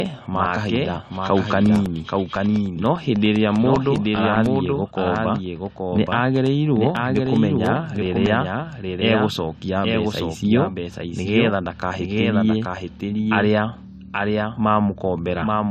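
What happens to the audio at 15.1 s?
At 15.1 s, the speech is heard twice. A second copy trails the first by roughly 0.7 s and sits about 5 dB lower. It is clean and dry, with no decay. That is a doubled audio track, likely from a slower second capture path running throughout.

The sound also has nothing above 13.8 kHz. It carries the coding artefacts of an earlier encode. This is low-bitrate audio saved at a high bitrate. The sound points to a lossy encode near 48 kbit/s, likely re-encoded as high-rate MP3, which cannot restore what was lost.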